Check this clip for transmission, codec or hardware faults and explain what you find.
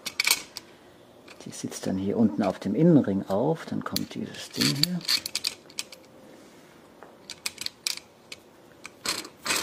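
Nothing in the audio points to a transmission, codec or hardware fault.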